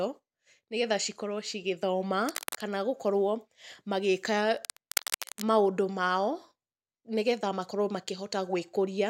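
A worn cable, connector or control was likely moved while the speech was recorded, its contact resistance jumping erratically. That cable scratch noise appears from 2.26 to 2.67 s, about 10 dB below the speech, then louder from 4.55 to 5.43 s, around 5 dB below, as ragged scratching rustle.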